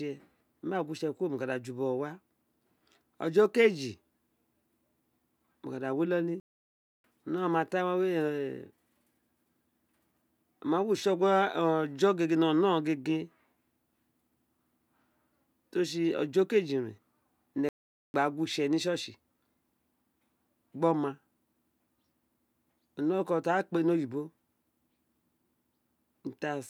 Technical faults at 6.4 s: playback stall

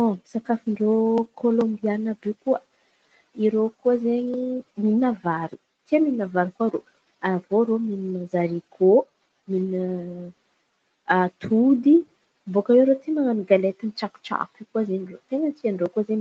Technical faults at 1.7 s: none

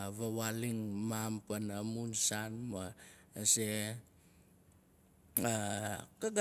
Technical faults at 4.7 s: none

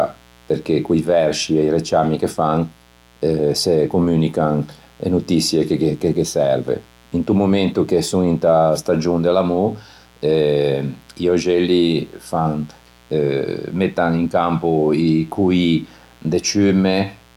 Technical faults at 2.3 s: mains buzz

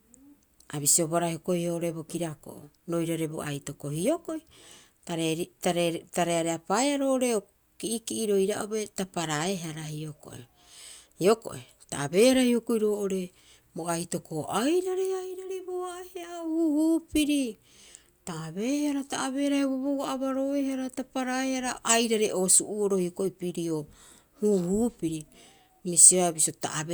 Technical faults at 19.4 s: none

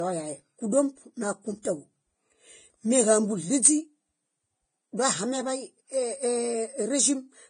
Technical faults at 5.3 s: low-bitrate audio saved at a high bitrate

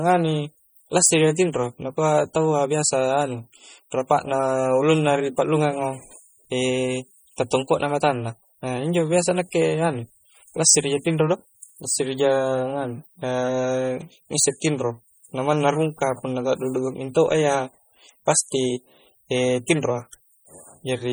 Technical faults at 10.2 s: MP3 compression

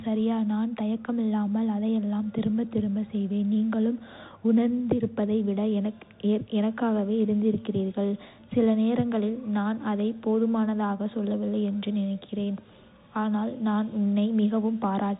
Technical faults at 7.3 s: Bluetooth CVSD headset codec

